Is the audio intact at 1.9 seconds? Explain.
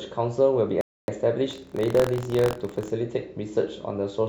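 No. At 1.9 seconds the speech is inside a stretch of buffer tearing that runs from 1.49 to 2.91 s. The writing and reading positions in the playback ring buffer have drifted until they cross within each period, so a small slice of every buffer holds audio from about 50 ms earlier, with hard joins at both edges. Repeating every period, those splices produce a steady 43.1 Hz robotic rattle over the speech, which fits a 1024-sample buffer.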